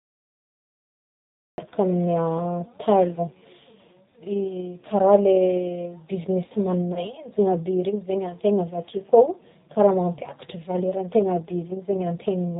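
The speech runs through a G.729 codec for all of it. The sound is rebuilt from a vocal tract filter, a pitch predictor and a few pulses per sub-frame, with nothing kept above 4 kHz, which fits the 8 kbit/s G.729A variant. The damage is plainly audible: the voice is muffled and band-limited, with a rough, slightly synthetic grain where the pulse model approximates the real waveform.

At the opening there is a cut-off start. The stream or recording began late, so the clip holds digital silence from 0.00 s until 1.58 s, and then the audio enters abruptly in the middle of a sound. There is no natural onset or fade-in, just a hard jump from nothing into speech already under way.

From 6.94 s to 7.02 s, VoIP packet loss concealed by the speech codec breaks the flow. About 20 ms of audio went missing, which fits two lost 10 ms frames. The decoder filled the gap by carrying its last pitch and filter forward at falling gain. 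The result is a short, stretched smear that fades, and the voice stays weak or distorted for tens of milliseconds or more before it recovers.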